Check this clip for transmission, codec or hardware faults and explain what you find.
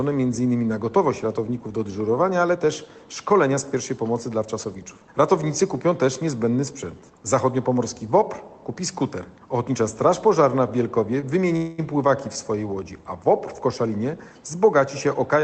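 Three transmission faults are audible, all in the last few seconds of the clip. The audio comes through a call codec whose band stops near 8 kHz, which fits Opus at around 20 kbps.

From 11.20 to 11.24 s there is a short stall from a late packet. One packet arrived late, and the jitter buffer had nothing to play. The receiver held the last sound for about 21 ms until the packet came. Playback then resumed from the same point. Nothing is lost, but the sound lingers briefly with a faint buzz or dip.

From 11.56 to 11.80 s there is a call audio freeze. The likely cause is packets held up in transit, leaving the jitter buffer empty. For about 219 ms the receiver keeps extending the last sound. It turns into a fading buzz or hiss rather than silence. When the packets arrive, the audio carries on where it stopped. A gap has been inserted, and nothing has been dropped.

From 15.05 to 15.43 s there is a jitter buffer speed-up. 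The buffer held more audio than its target. To shed that extra delay, the receiver cut many tiny pitch-length pieces in quick succession. Roughly 40 ms was removed. The sound runs at about 109% speed with unchanged pitch, so it comes across as slightly hurried.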